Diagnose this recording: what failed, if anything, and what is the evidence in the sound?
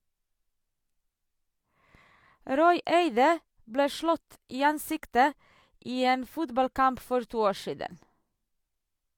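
At the playback stage, a gap between stream segments: at 4.50 s the speech stops dead for about 9 ms and resumes with hard edges. Unlike a packet dropout, nothing is missing; the sound picks up exactly where it left off, because mistimed segment timestamps left a hole filled with silence.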